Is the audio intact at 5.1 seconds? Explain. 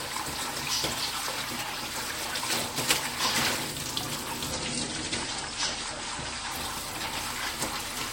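No. From 4.52 to 6.52 s the adaptive stream switches to a lower bitrate: content above 9.7 kHz vanishes abruptly, with rising codec artefacts, consistent with a drop from about 96 to 32 kbit/s.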